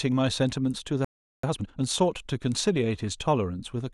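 At 1.05 s the speech cuts out in mid-flow and the output stays silent until 1.43 s, a gap of about 390 ms. This is a playback stall. The likely cause is that the player's buffer ran dry or its output thread was held up, leaving nothing to send to the device. The sound simply stops rather than fading, and then it returns.

From 1.43 s to 1.81 s the recovery shows up as time-compressed catch-up. To work off the backlog built up during the stall, the player drops short slices of the signal and cross-fades across the joins, getting through the material at twice the normal rate. Pitch stays where it was, so the speech sounds rushed rather than higher, until normal pacing resumes.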